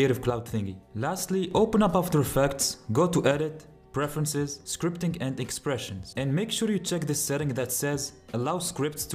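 A stereo channel likely drops out from 0.30 to 1.51 s, and again from 3.31 s to the end. This is one channel dropping out. In the mono sum, shared sound falls abruptly by about 6 dB, and anything carried only by that channel vanishes.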